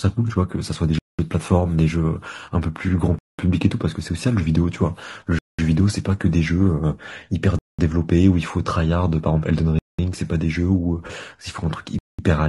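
Throughout, the speech was likely encoded with low-delay AAC compression (AAC-ELD) at a rate that fits about 32 kbps. At this low bitrate, coarse coding puts noise between the harmonics, leaving a rough, grainy voice and a thin top band.

The audio was delivered in 2-second chunks with 200 ms of silence inserted at each join, causing a gap between chunks at 0.99, 3.19, 5.39, 7.59 and 9.79 s. Each is a short hole in the sound.

From 11.07 to 11.11 s, AAC frame loss with concealment occurs. About 20 ms of data, consistent with a single frame, went missing, and the decoder patched it from the preceding spectrum. The result is a brief smeared, noisy blip.

At 11.99 s, a final gap between chunks cuts another 200 ms hole.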